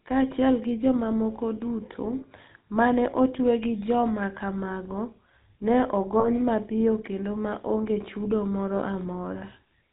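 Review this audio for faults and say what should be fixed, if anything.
The speech carries the GSM full-rate codec throughout. The codec models the vocal tract and excites it with a decimated pulse train, which gives a plainly audible buzzy, gravelly texture and removes everything above 4 kHz. The sound fits the 13 kbps full-rate mode. Prevention: capture or relay through a wideband codec instead of GSM full rate.

Lost GSM frames appear twice. From 6.2 to 6.29 s, just before "mapiyo kendo ma onge", a 40 ms gap is filled by repeating the last good frame. The gap fits two lost frames. From 8.76 to 8.8 s, right after "kendo ma onge chudo", a 20 ms gap is filled the same way and fits a single lost frame. Both repeats leave a brief rough, metallic ring. Prevention: strengthen the transmission path with better radio coverage or error protection so frames arrive intact.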